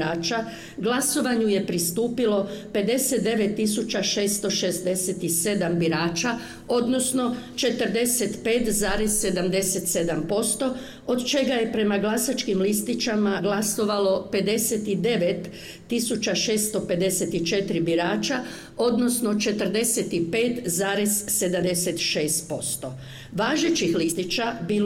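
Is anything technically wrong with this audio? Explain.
Yes. The audio has compressed frames skipped at three points: 13.38–13.40 s, 21.61 s and 24.11–24.13 s. Each time, the decoder never plays a run of encoded frames, so the audio jumps forward, losing about 50 ms at the first two and about 70 ms at the last. Each join has no silent gap, which sets it apart from a dropout.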